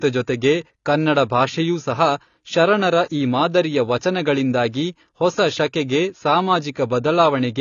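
From start to finish the speech is band-limited, with nothing above 7 kHz, so it sounds dull and lacks air. Sibilants come across fizzy and smeared, and held vowels carry a warble. The likely cause is AAC compression at a low bitrate, which fits roughly 24 kbps AAC-LC. With so few bits per frame, the encoder lowers its cut-off and quantises the remaining frequency lines coarsely, leaving gaps that are audible throughout.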